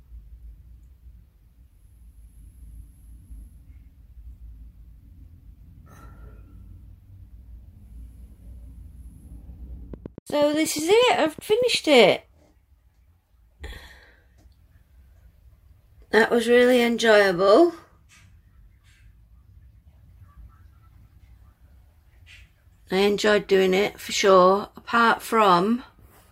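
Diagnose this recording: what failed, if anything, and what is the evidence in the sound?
A train of clicks runs from 9.94 to 11.76 s. About fifteen near-identical ticks arrive at a steady 8.3 per second. They peak roughly as loud as the sound itself. The likely cause is interference pickup in the analogue wiring, or a faulty connection or power supply injecting repeated pulses.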